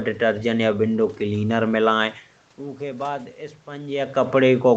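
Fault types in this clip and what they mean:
Automatic gain rising: from 2.79 s to the end, the input dropped by about 13 dB and the gain control slowly turned its gain back up, so the sound and the room noise swell together instead of jumping at once. On a waveform the envelope widens steadily across those final seconds. On a spectrogram the noise floor between phrases brightens along with the sound, unlike the talker's own movement near 4 s, which changes only the voice.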